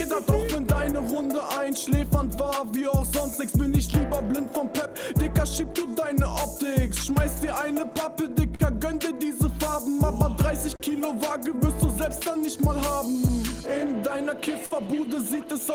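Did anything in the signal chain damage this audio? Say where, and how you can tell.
Yes. The damage happened at the network and jitter-buffer stage of a real-time link. The underlying fault is clock drift between sender and receiver. The sender's clock runs about 3% slow compared with the receiver's, so the buffer keeps draining. You can hear it as small, unevenly spaced timing hiccups that run through the whole clip and never settle into a steady rhythm.

Those hiccups are repeated timing corrections, from 1.26 s to 13.88 s. Because the sender is slow, the receiver keeps repeating short pieces to stay in step, so playback runs at 98% speed over that span and adds roughly a fifth of a second in total. The edits all go the same direction but land irregularly, and the tempo feels slightly unsteady and dragging rather than showing obvious glitches.

From 7.98 s to 8.62 s there are repeated stalls, a stutter where the buffer ran dry three times in quick succession. 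Each time, the receiver kept extending the last sound until data arrived. That adds 55 ms in total, with the longest hold at 45 ms, and nothing is actually lost.

At 10.76 to 10.83 s there's a short stall from a late packet. One packet came 37 ms late, so the receiver held the previous sound for those 37 ms and then picked up where it left off. Nothing goes missing, but that moment sounds briefly frozen, with a small buzz or dip where the stretched sound sits.

Between 12.24 s and 14.74 s you get scattered short gaps. About four packets were late or lost, one at a time, and each hole was patched by continuing the last sound. The fill adds up to roughly 70 ms, the longest patch is around 50 ms, and it covers only a few percent of that stretch.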